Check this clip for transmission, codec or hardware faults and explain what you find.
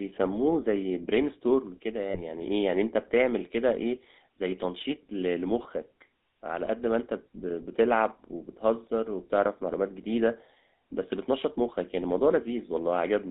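Two faults are present: the whole clip has passed through a GSM full-rate codec, and there are two short dropouts from lost GSM frames.

GSM full-rate codec, throughout: the speech was reduced to a vocal-tract model driven by sparse, regularly spaced pulses, which fits a 13 kbps GSM full-rate stream. The result is a plainly buzzy, gravelly texture, confined to a narrow 250 Hz to 3.7 kHz band.

Lost GSM frames, 2.1 to 2.22 s and 6.66 to 6.68 s: missing frames were concealed by repeating the last good frame's settings, which fits about two frames at the first point and one at the second. Each gap is heard as a brief, rough metallic ring that holds the sound rather than a clean silence.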